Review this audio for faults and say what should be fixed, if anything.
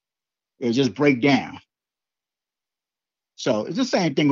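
Nothing in this speech recording needs fixing. No technical problems can be heard at any point, so no changes are called for.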